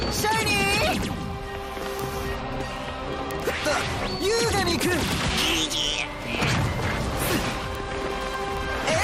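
Word clock ticks run through the audio from 0.14 s to 9.02 s. They are sharp clicks of uneven strength at a steady rate of about twenty per second, some two hundred in all. The receiving device is free-running rather than locked to the sender's clock, so the two clocks slip by around 500 ppm. Each slip misreads a few samples and drops or repeats one. Unlike buffer dropouts, these leave no gaps, and unlike clipping crackle their rate stays fixed whatever the signal level.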